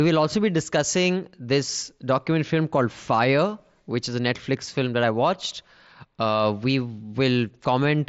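No technical faults are present in the speech, which carries the band-limited character of a Bluetooth mSBC headset link with nothing above about 7.7 kHz.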